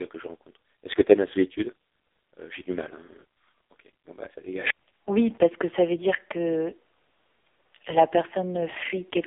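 From the first moment to the last, the speech carries the sound of the AMR narrowband mobile codec, the old 2G/3G phone coder. Nothing gets through above about 3.7 kHz, and the lows thin out below roughly 300 Hz, so it's boxed into a phone-line band. The damage is heavy. The voice comes out buzzy and synthetic, rebuilt from a crude vocal-tract model with very few pulses, which points to one of AMR's lowest modes, around 5 kbps.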